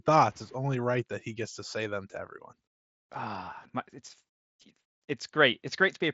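No technical faults heard.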